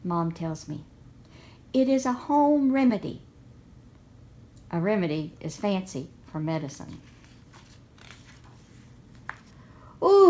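Short concealed packet loss at 2.88 to 2.91 s, on a call-path recording whose highs stop at 8 kHz, which fits G.722. About 20 ms of audio failed to reach the decoder in time, and the receiver covered the gap with roughly 15 ms of synthetic continuation extrapolated from the preceding sound before crossfading back into the real signal. The result is a brief smear or wobble where the original detail is missing.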